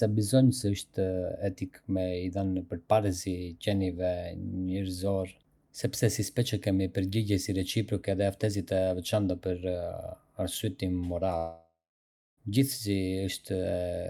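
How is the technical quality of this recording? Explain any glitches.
There is one clear glitch, a long network dropout. From 11.37 to 12.39 s, audio likely stopped arriving. The receiver smeared the last sound into a fading buzz, then 0.64 s of silence, and speech resumes with about a second lost.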